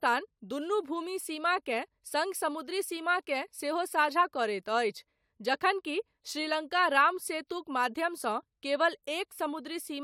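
No audible technical faults here.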